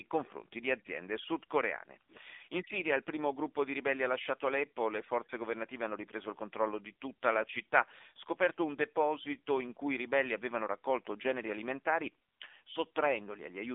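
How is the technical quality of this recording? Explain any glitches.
The technical quality is poor throughout, because the speech has passed through an AMR narrowband mobile codec from start to finish. The band is squeezed to roughly 250 Hz to 3.6 kHz and nothing reaches above 3.7 kHz, so the sound is thin and muffled. The codec rebuilds the speech from a vocal-tract model and a few pulses per frame, and the plainly audible damage, a buzzy, synthetic edge, fits a low AMR-NB mode around 7.4 kbps. A spectrogram shows a flat ceiling at 3.7 kHz and almost no energy below 250 Hz.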